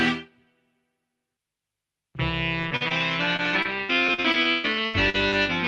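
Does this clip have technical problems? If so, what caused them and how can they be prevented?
Yes. From 2.61 s to 5.48 s there is repeated packet loss, heard as a robotic, choppy stretch. About fifteen short holes occur there, the longest 143 ms. Each is patched by extending the preceding sound, so roughly half a second, close to a fifth of the span, is rebuilt rather than real. Unlike a single long dropout, the holes keep recurring, which gives the choppy texture. The call path also limits the band to about 12 kHz. Preventing this takes a steadier network link, along with a larger jitter buffer or forward error correction.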